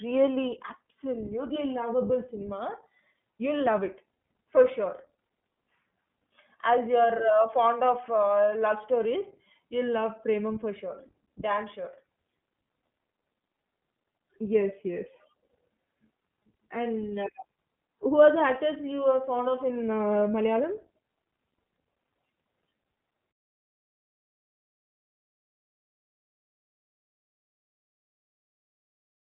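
From start to end the speech carries plainly audible iLBC codec damage. The line band runs from about 150 Hz to 3.4 kHz, so sibilants lose their crispness and the low end thins out. Each frame's excitation is coded on its own, giving a rough, slightly synthetic texture that fits the 20 ms, 15.2 kbps mode. A spectrogram shows a hard ceiling at 3.4 kHz and an empty band below 150 Hz.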